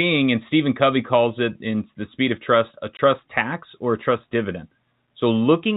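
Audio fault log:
2.97–2.99 s, packet loss filled with silence: a 20 ms gap just before "tax or a trust", consistent with two 10 ms packets replaced by silence. The waveform drops abruptly to a flat line. The spectrogram shows a narrow blank vertical stripe.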